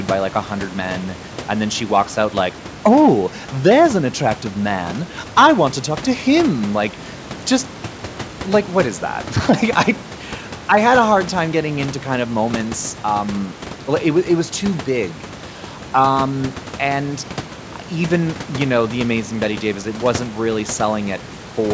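Speech over a wideband call path, content topping out at 8 kHz and room noise sitting about 18 dB below the talker, with no faults present.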